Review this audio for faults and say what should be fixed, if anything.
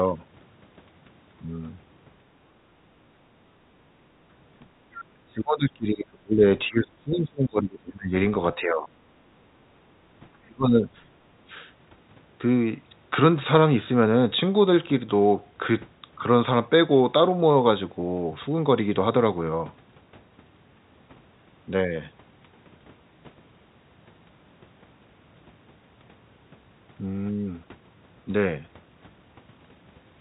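Background gated by the echo canceller, at 2.82 to 2.93 s and 3.58 to 3.69 s: the room sound behind the speech drops for about a tenth of a second each time, by about 10 dB in the first dip and about 17 dB in the second, then comes back. The echo canceller hears the far-end loudspeaker and clamps the microphone down while it plays, taking the ambient sound with it, then releases. Prevention: replace the hard gate with gentle residual-echo suppression and add comfort noise so the background stays steady.

Speech suppressed in double talk, at 5.09 to 6.43 s, 6.68 to 8.13 s, 8.55 to 8.89 s and 10.43 to 10.88 s: the speech sinks heavily, by roughly 30 dB in the first, second and fourth stretches and about half that in the third, for spans of a third of a second to one and a half seconds. The likely cause is the echo canceller failing to tell the near talker from loudspeaker echo while both sides speak, so it attenuates everything. 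Prevention: tune the canceller's double-talk detector so near-end speech keeps full level while the far end is active.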